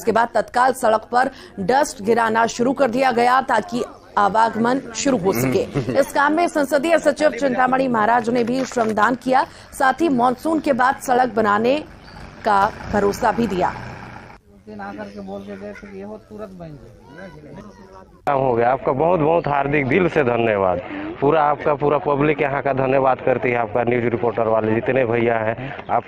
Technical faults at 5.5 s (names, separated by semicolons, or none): overlap-add ripple